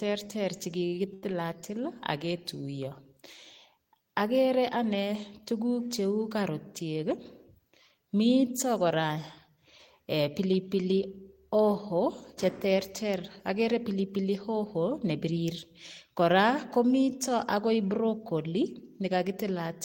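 A speech clip with two kinds of network fault. Short stalls from late packets occur at 0.87–0.94 s and 1.14–1.24 s. Sound is held for 46 ms, then 83 ms, while the jitter buffer waits. A jitter buffer speed-up follows at 15.25–15.48 s. Speech runs at 113% speed, same pitch, as about 40 ms of pitch periods are trimmed.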